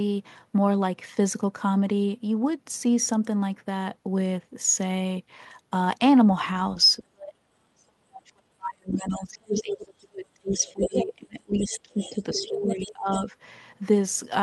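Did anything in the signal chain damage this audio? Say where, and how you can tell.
Yes. The call processing stage most likely failed during double talk. Between 7.0 and 13.09 s the echo canceller could not tell the talker from loudspeaker echo, so the speech is suppressed in double talk. It dips by as much as about 40 dB for roughly five seconds in total.

In the same call processing stage, the canceller left residual echo, most likely from the loudspeaker feeding back into the microphone. The other side's voice leaks through at 8.93–9.22, 9.54–9.74, 10.49–11.05, 11.59–11.8, 12.0–12.93 and 13.12–13.25 s, about 5 to 15 dB below the talker.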